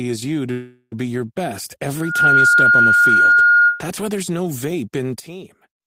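From 0.51 to 0.94 s, after "as you to", the speech stalls into a fading buzz for about 0.4 s, then resumes at "be your" with nothing lost. This is likely a call audio freeze, where delayed packets emptied the jitter buffer.

From 1.96 to 3.86 s, a 1.4 kHz tone swells within about a third of a second into a squeal roughly 10 dB above the speech, ending before "why there's no vape". This is loudspeaker feedback, with the microphone re-amplifying its own loudspeaker.

At 5.20 s, right after "there's no vape in", speech and background drop together by about 12 dB and stay down to the end. This is likely a sudden gain jump, where the gain changed abruptly without a ramp.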